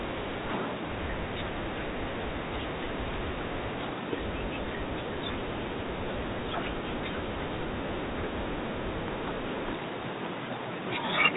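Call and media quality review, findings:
Loud pop, 4.36 s: sharp single click over the speech, roughly 10 dB above the signal; likely a voltage step entering the chain from a plug, switch, static discharge or driver glitch, shaped by downstream circuitry into a brief transient. Loud pop, 9.08 s: same symptom, louder, roughly 15 dB above signal, single event. Speech continues unbroken beneath both; transients are added on top rather than replacing audio. Check cabling, grounding and capture driver.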